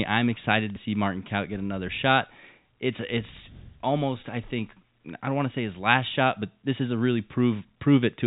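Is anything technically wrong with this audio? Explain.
No, nothing technically wrong can be heard here.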